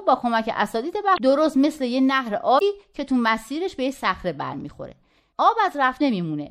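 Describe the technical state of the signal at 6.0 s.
At 6.0 s a short glitch cuts through the sound, lasting from 5.97 to 6.02 s. This is damaged data in a compressed stream. A stretch of the encoded stream was corrupted, so the decoder misread or rejected the frames there, lost its place and had to hunt for the next valid frame header before it could resume. That brief resynchronisation is what produces the blip instead of clean audio.

Underneath, the speech has a watery, swirling quality, with a metallic edge on s sounds, and this damage is plainly audible. The likely cause is MP3 compression at a rate that fits about 64 kbps. With so few bits, the encoder drops weaker frequency components that flicker in and out from frame to frame, which smears the sound.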